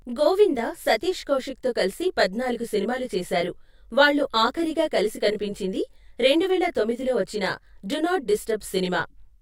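From start to finish the speech carries a channel delay with comb filtering: one channel arrives roughly 20 ms behind the other, and when the two are summed to mono their shared content cancels at evenly spaced frequencies, the first notch sitting near 20 Hz. The voice sounds rough and slightly doubled. Unlike a flanger or phaser, the notches never sweep, and at around 20 ms the lag is too short to hear as a separate echo.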